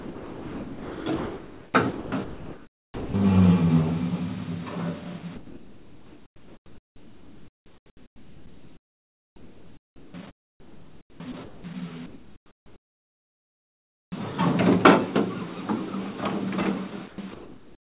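From 0.0 to 3.14 s, and again from 5.36 to 11.64 s, the sound is chopped by the voice detector: the detector likely switched on and off repeatedly, swapping quiet stretches for comfort noise, so the audio stutters. From 12.06 to 14.12 s, comfort noise replaces the background, likely because transmission paused during silence; a flat, featureless hiss about 8 dB quieter stands in for the real ambience, which sits about 45 dB below the loud parts. At 14.1 s the onset is clipped by the voice detector, which likely caught the returning sound late; the first 20 ms are lost and the sound starts abruptly. From 17.08 s to the end, the voice detector chops the sound again, likely for the same reason, with comfort noise filling most of that stretch. Throughout, the band stops at 4 kHz, which fits a 64 kbps G.711 mu-law call path.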